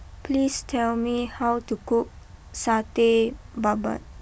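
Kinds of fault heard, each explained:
Nothing stood out as a problem on listening to this speech recording.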